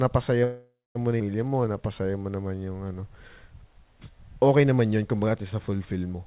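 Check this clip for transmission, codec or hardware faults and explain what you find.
Two transmission faults show up in the narrowband speech, which cuts off at 4 kHz as you'd expect from G.711 A-law at 64 kbps.

From 0.44 to 0.97 s there's a call audio freeze: the last sound stretches into a fading buzz, with about 0.22 s of silence at the end. The likely cause is packets stalling and draining the jitter buffer. Speech then resumes where it stopped, so nothing is lost, but it runs about 0.51 s late.

From 1.48 to 3.45 s a jitter buffer slow-down repeats pitch periods to rebuild its reserve. The speech plays at roughly 87% speed with the same pitch, sounding drawn out and adding 265 ms.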